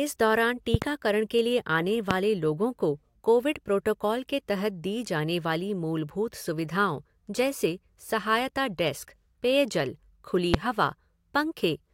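A double loud pop at 0.74–0.85 s, just before "के लिए", then single pops at 2.11–2.13 s and at 10.54–10.56 s after "सहायता डेस्क पेयजल खुली", peak roughly 15 to 20 dB above the speech, which continues underneath. Each is likely an electrical voltage step, such as a switch or static discharge.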